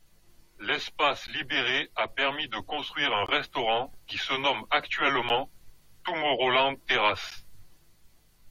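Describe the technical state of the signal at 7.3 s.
A gap between stream segments occurs at 7.30 s. Two consecutive pieces of the stream carry timestamps that don't quite meet, and the player fills the 12 ms space between them with silence. The speech stops dead for that instant and resumes just as abruptly, leaving a short, hard-edged hole rather than a fade. Nothing is missing from the speech itself, only delayed, and the timing points to a boundary between 2-second segments.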